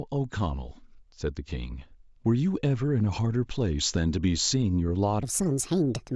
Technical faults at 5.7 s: wrong sample rate

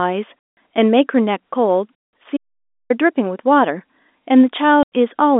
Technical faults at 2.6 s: audio dropout to silence

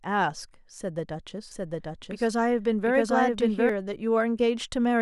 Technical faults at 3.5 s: doubled audio track

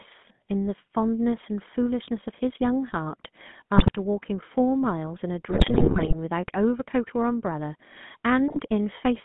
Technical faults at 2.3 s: GSM full-rate codec

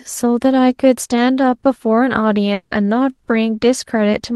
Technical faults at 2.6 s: long network dropout

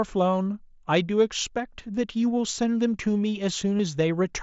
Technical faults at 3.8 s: concealed Bluetooth headset packet loss

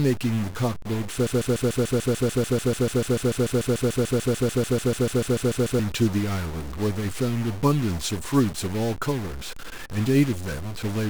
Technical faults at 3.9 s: stuck bit; broken-record loop

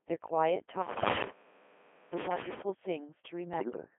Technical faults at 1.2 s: Codec 2 vocoder; bit errors on digital voice radio

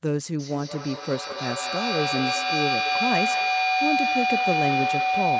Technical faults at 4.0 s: feedback howl

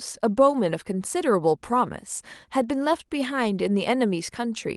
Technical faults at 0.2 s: none

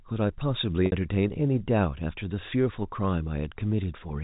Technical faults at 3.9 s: none

